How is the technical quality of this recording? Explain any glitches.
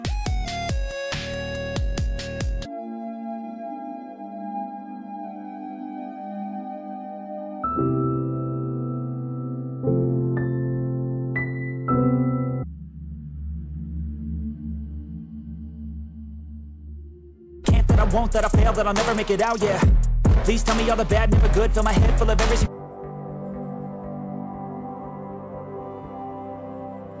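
No glitches, dropouts or other technical faults can be heard anywhere in the recording, so there is nothing to explain.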